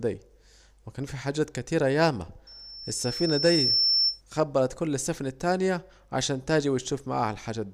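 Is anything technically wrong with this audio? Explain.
Yes. Loudspeaker feedback squeal, 2.47 to 4.21 s: the microphone re-amplifies its own loudspeaker, so a 5.4 kHz tone swells over about a second and a half to roughly 5 dB above the speech.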